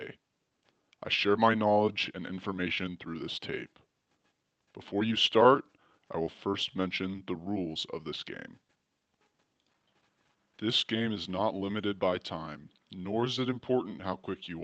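No technical faults are present; the audio carries the ordinary character of a WebRTC call path using the Opus codec, with a high-frequency ceiling near 8 kHz that fits a moderate bitrate of around 24 kbps.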